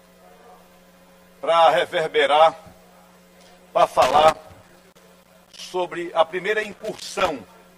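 A worn or dirty contact is making and breaking intermittently, producing loose connector crackle: irregular scratchy bursts chopping the audio from 3.87 to 5.63 s and again from 6.63 to 7.29 s.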